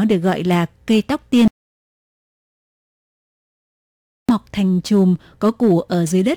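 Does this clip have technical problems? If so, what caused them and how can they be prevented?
Yes. Hard clipping runs through the whole speech recording. The level is driven about 5 dB past full scale, so a few percent of peaks are cut flat and crackle. Prevention: leave several decibels of headroom when setting input gain.

An audio dropout to silence runs from 1.48 to 4.29 s, after "gọi là cây tóc" and before "thành chùm". About 2.8 s of digital silence replaces the room tone, likely from a lost input connection. Prevention: secure cables and monitor the input signal while recording.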